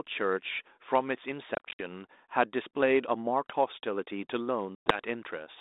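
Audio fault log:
1.55–1.81 s and 4.75–4.96 s: packet loss on an ADPCM call. About 140 ms then 110 ms dropped to silence; the desynchronised predictor returns speech slightly distorted.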